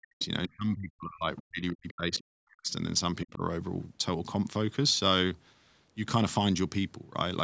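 From 0.00 to 0.23 s, and again from 0.46 to 2.73 s, the speech is suppressed in double talk: the level dips sharply, as deep as roughly 40 dB, likely because the echo canceller could not separate the talker from loudspeaker echo while both sides spoke. A shallower dip of roughly 20 dB follows at 3.24 to 3.42 s. Brief scraps of the other side's voice leak through at 0.21–0.25 s, 1.88–1.94 s and 2.19–2.24 s, faint, far below the talker, likely residual echo the canceller left in the microphone signal.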